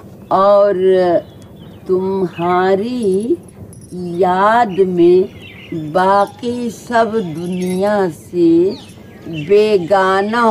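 No technical faults are audible.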